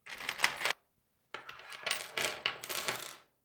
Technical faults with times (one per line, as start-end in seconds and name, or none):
0.71-0.73 skip ahead
0.81-1.34 jitter buffer speed-up